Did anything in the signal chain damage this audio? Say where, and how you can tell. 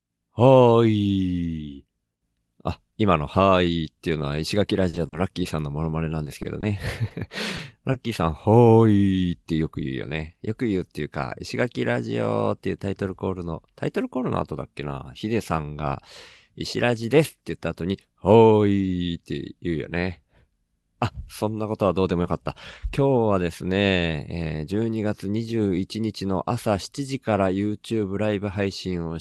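Yes. Repeated packet loss (robotic sound) in the network stage, 4.89–5.47 s: four closely spaced gaps, up to 40 ms, patched by stretching prior sound. The clustering makes it choppy rather than merely ticking.

Scattered short gaps, also network, 6.25–7.96 s: about seven isolated dropouts, up to about 20 ms, concealed individually. They leave brief hiccups between clear stretches, not continuous robotic texture.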